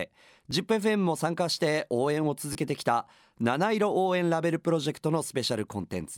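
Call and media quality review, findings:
Repeated buffer at 0.51 s: brief click in the speech where one short piece plays twice with a hard join. Playout/device buffer underrun; the repeat length fits a 10 ms buffer, costing about 10 ms of audio.

Repeated buffer, 2.53–2.55 s: same piece heard three times back to back, a short buzz-like stutter. Same underrun mechanism, two extra plays, about 20 ms lost.

Unlike a dropout, there's no gap or silence. Unlike concealment, the repeats are exact copies with no smoothing.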